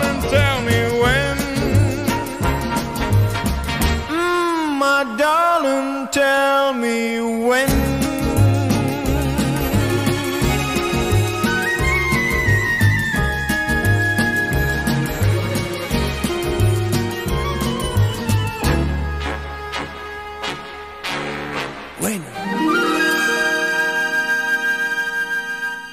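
Sample clock jitter runs through the whole clip. The converter's clock wavers by around 5 microseconds, so samples land early or late. Steep, loud passages pick up a grainy hiss about 25 dB below the signal. It disappears when the sound goes quiet.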